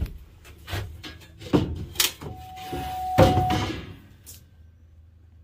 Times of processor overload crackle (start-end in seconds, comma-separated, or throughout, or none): none